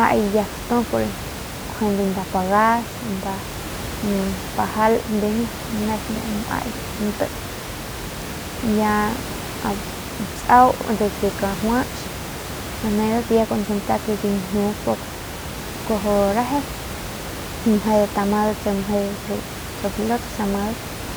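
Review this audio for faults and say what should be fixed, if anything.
Nothing here needs fixing.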